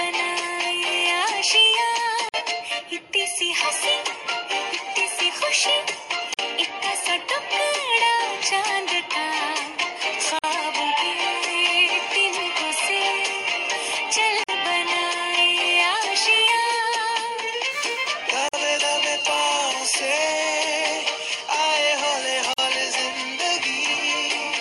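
At 2.29, 6.34, 10.39, 14.44, 18.49 and 22.53 s the sound drops out for about 50 ms and then resumes where it left off. These are gaps at the joins of encoded pieces, repeating every 4 s. Each piece was encoded on its own and butted together untrimmed, so the encoder's start-up delay and final-frame padding remain as silence. A waveform shows flat notches with slightly softened edges, and a spectrogram shows thin vertical blank strips.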